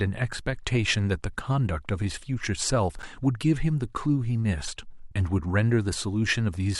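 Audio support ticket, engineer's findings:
Chunks out of order, 2.99–3.03 s: a quick jumbled blip in the speech, with three hard joins. One 10 ms chunk landed three chunks late and plays after the ones meant to follow it. Nothing lost, just reshuffled. Probable component: jitter buffer or write queue ordering.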